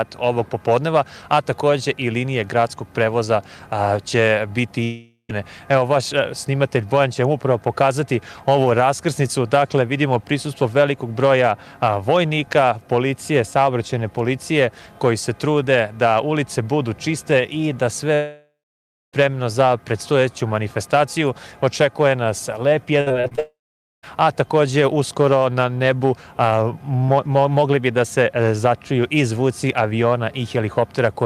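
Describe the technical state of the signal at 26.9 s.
At 26.9 s the signal is intact, with no audible fault at that moment.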